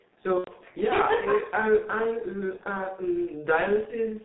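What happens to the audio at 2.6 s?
From 2.57 to 2.63 s the sound smears into a brief stretched, fading sound: VoIP packet loss concealed by the speech codec, extrapolating from its last pitch and filter across a gap that fits one lost 30 ms frame. Underneath, the audio is muffled and hoarse, with nothing above 4 kHz, from the G.723.1 codec, which fits about 6.3 kbit/s.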